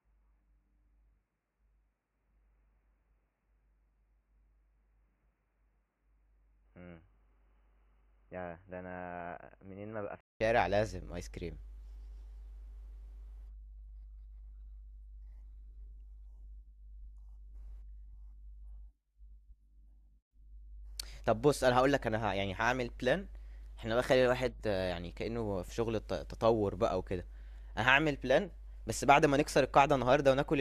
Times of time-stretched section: none

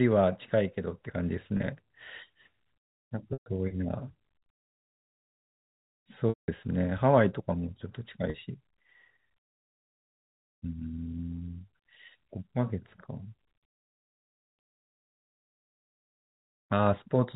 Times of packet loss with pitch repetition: 1.57-1.67, 3.33-3.46, 6.29-6.48, 8.30-8.38

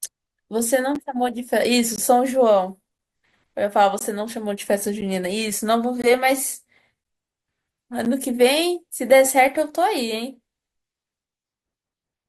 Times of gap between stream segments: 0.95, 1.96-1.98, 3.99-4.01, 5.01, 6.02, 7.04, 8.05

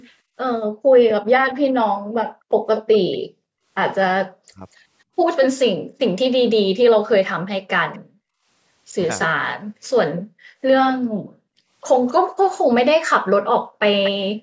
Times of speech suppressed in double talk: 0.75-1.75, 4.28-4.63

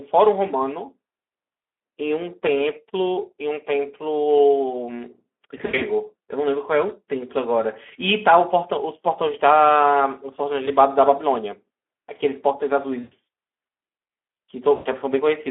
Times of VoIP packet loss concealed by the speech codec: 5.57-5.84, 10.65-10.71, 12.99-13.13, 14.75-14.88

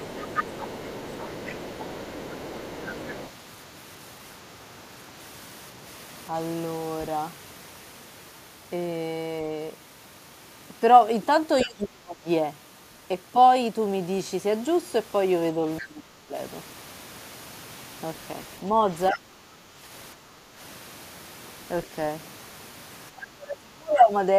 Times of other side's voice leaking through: 0.00-3.30, 11.59-11.66

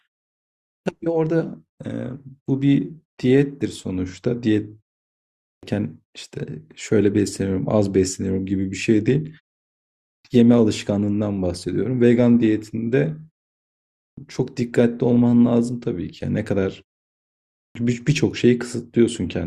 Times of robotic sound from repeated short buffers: none

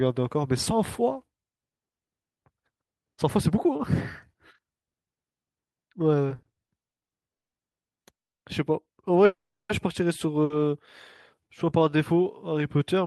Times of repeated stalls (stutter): 6.29-7.55

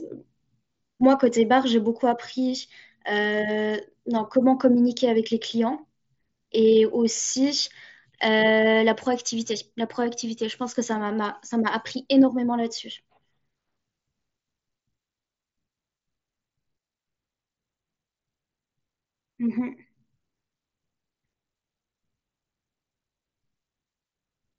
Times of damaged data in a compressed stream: none

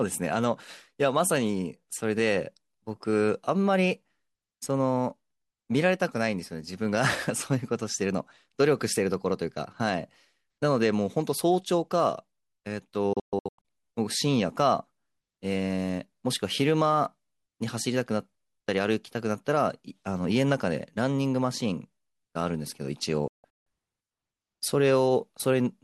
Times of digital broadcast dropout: 13.13-13.65, 23.28-23.67

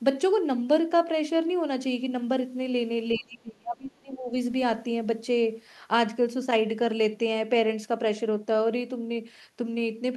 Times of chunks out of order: none

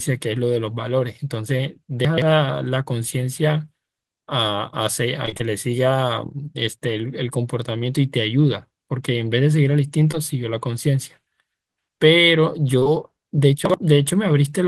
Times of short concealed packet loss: 10.12-10.15, 12.79-12.87

